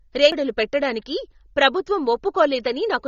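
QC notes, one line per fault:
throughout: AAC compression. The speech sounds dull and smeared, with nothing above 7 kHz and a plainly audible warbly, fizzy grain on sibilants and held sounds. This is likely low-bitrate AAC-LC coding, which fits about 24 kbps, where the encoder drops the top band and starves the rest of bits.
0.32 s: CD skip. A near-silent gap of just a few milliseconds, after which the audio resumes from a different point rather than where it left off. The laser has jumped to another turn of the disc's spiral, so playback briefly mutes and picks up at a displaced position.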